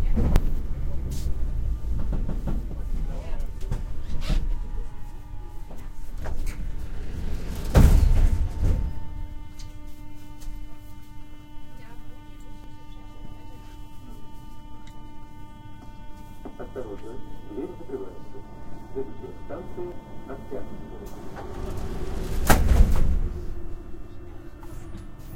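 At 0.36 s, 5.8 s, 12.64 s and 19.92 s the audio jumps forward, with no gap of silence at the join. Each jump skips roughly 40 ms of material. The likely cause is a dropped buffer (overrun): the recording software fell behind, the hardware overwrote a block of samples before it was read, and the audio on either side was spliced straight together. That discontinuity produces the abrupt skip.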